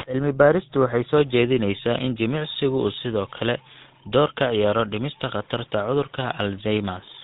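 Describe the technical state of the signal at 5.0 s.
At 5.0 s the speech has a buzzy, gravelly roughness with a dull, band-limited top, and this damage is plainly audible across the whole clip, not just at that moment. It comes from the GSM full-rate codec, whose sound points to a 13 kbps rate. The codec rebuilds the voice from a vocal-tract model fed by a sparse, regularly spaced pulse excitation, which produces the grit, and it passes nothing above 4 kHz.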